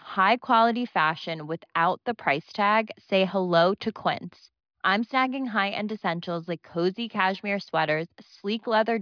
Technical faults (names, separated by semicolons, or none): none